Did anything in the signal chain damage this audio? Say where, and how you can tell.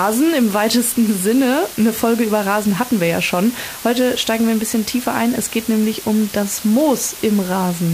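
Yes, and it's in the sample-format conversion stage: this is low bit depth with dither. From start to finish there's a steady, even hiss sitting under the speech, loud enough to be only around 15 dB below it, but with no crunch or gritty distortion on the louder syllables. That fits the signal being squeezed down to about 5 bits with dither added before rounding, so the quantisation error comes out as constant white noise instead of distortion.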